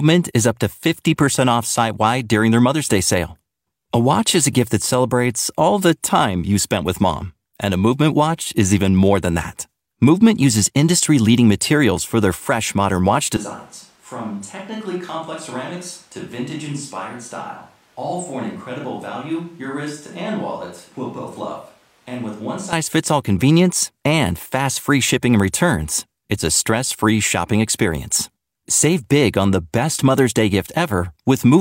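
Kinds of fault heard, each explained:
Switch to a distant microphone: from 13.37 to 22.73 s the speech suddenly goes roomy and hollow, thinner in the bass, about 10 dB quieter, with room noise only about 30 dB down, likely because the close mic dropped out and a farther one took over.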